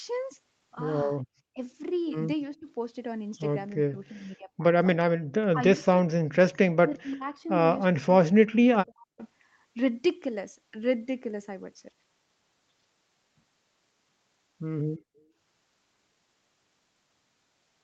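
This is a speech clip with two kinds of echo-canceller fault. The talker's level keeps dropping at 1.54–1.6 s, 2.52–2.68 s, 3.81–4.64 s, 5.49–7.47 s and 7.92–9.21 s. The early dips reach about 15–20 dB. The later ones go deeper, near 40 dB. This is speech suppressed in double talk, likely from both sides talking at once, with the canceller pulling down the talker along with the echo. Separately, the room sound is gated by the echo canceller at 5.20–5.24 s. It falls by about 19 dB while the loudspeaker plays, then comes back. Throughout, the audio stops at 8 kHz, as expected for an Opus call path.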